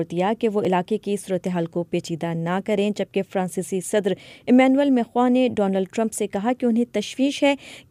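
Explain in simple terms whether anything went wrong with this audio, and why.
Two tiny ticks, at 0.65 s and 6.59 s, come from a block of digital silence. For about 1.3 ms and 0.85 ms the sound drops to silence and returns abruptly with no fade. Unlike a longer dropout, each gap is too brief to hear as a hole, so only the click remains.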